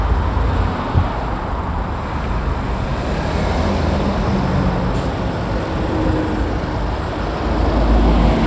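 No technical faults are audible.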